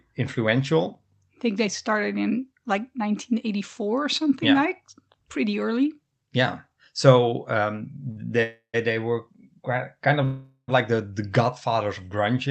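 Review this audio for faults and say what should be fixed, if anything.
At 8.11 to 8.18 s there is a short stall from a late packet. A sound is held for about 46 ms, then the speech resumes intact. It is too brief to fade into silence, which separates it from a freeze.

At 8.43 to 8.76 s and 10.24 to 10.70 s there are call audio freezes, likely from packets delayed in transit emptying the jitter buffer. Each is a fading buzz or hiss that drops to silence (about 110 ms and 80 ms) before speech resumes where it stopped. Unlike a dropout, nothing is lost; the speech just arrives late.

To prevent both, give the jitter buffer more headroom or adapt its target delay to the network's measured jitter.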